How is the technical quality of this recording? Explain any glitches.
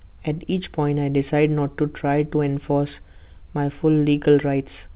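No glitches turn up anywhere in the speech, though it comes through a call path with nothing above 4 kHz, which fits a narrowband telephone codec such as G.711 A-law at 64 kbps.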